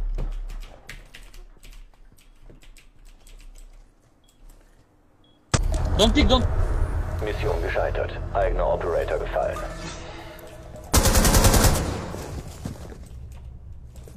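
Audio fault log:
2.37–2.42 s, 5.53–5.59 s, 9.85–9.91 s: damaged data in a compressed stream. Three short blips of roughly 40 to 60 ms each break into the sound. Corrupted bytes leave the decoder unable to read those frames, so it emits garbled output until it finds the next valid frame header.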